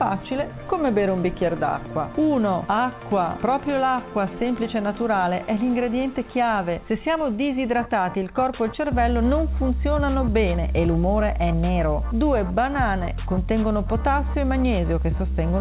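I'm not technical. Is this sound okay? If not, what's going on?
Yes, this sound is okay, and nothing is going on that needs fixing.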